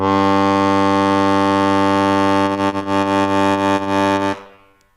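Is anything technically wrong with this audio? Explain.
Yes. From 2.45 s to 4.75 s the music turns choppy as small pieces drop out. This is repeated packet loss (robotic sound). About fifteen holes open in quick succession, none longer than 40 ms. Each is patched by stretching the preceding sound, which covers roughly 15 percent of that stretch. In total about 350 ms is filled in and 280 ms of the original is simply missing.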